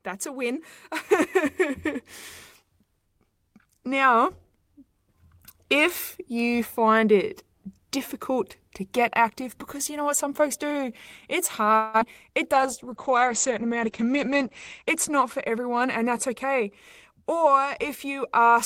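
From 11.75 to 12.03 s a long network dropout is the likely cause: packets stopped arriving, and the receiver stretched the last sound into a buzzy fill of about 256 ms. About 60 ms of audio never returns.

From 12.31 to 13.11 s a jitter buffer slow-down rebuilds the reserve by repeating pitch periods, adding 59 ms. The speech runs at 93% speed with unchanged pitch and drawn-out sounds.

At 12.54 s a call bitrate drop forces the encoder from 40 to 11 kbps, cutting bandwidth from 20 kHz to 8 kHz. The speech turns muffled and coarse, stays at its lowest for 2.08 s, and clears by 16.78 s.

From 14.82 to 16.61 s, and again from 17.11 to 17.47 s, jitter buffer speed-up trims surplus delay by cutting out short pitch-period pieces, roughly 150 ms and then 50 ms. The speech hurries at 108% and then 110% speed, with pitch unchanged.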